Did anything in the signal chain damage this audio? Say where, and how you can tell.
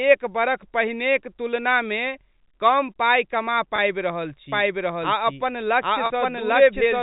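Yes. The network stage shows packet loss with pitch repetition, twice. At 3.76 to 3.78 s about 20 ms of audio goes missing, which fits a single lost packet. At 6.06 to 6.10 s the gap is 40 ms, consistent with two packets in a row. Each gap sounds like a briefly held, buzzy tone. The receiver is looping the last pitch period to fill the hole.

From 4.52 s to the end there is a doubled audio track. A second full-band copy runs roughly 0.7 s behind the first, at about the same level. The copy has no reverb tail and no room colour. It is a clean duplicate, and it starts abruptly at 4.52 s. The cause is likely a second capture path or an edit that left two copies out of alignment. This points to storage or editing rather than the codec. The G.711 A-law telephone band underneath is intact.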